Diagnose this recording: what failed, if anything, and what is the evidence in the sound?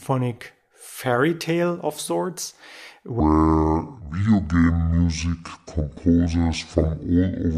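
From 3.20 s to the end, the speech suddenly drops about ten semitones and drags at 0.609 times its proper pace. This section at the wrong speed likely comes from playback or editing against the wrong clock, which moves tempo and pitch together.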